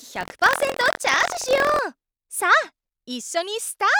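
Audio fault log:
0.00–1.79 s, buffer tearing: a rattling 43.1 Hz buzz that fits a 1024-sample buffer, as roughly a tenth of each period replays audio about 70 ms old.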